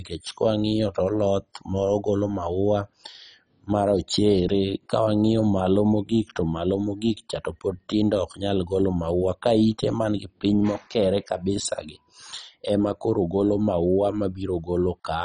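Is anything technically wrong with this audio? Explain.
Yes. Throughout, the speech sounds dull and gurgling, with nothing above 10.4 kHz. This is likely heavy MP2 compression at a very low bitrate, around 32 kbps, switching off upper bands.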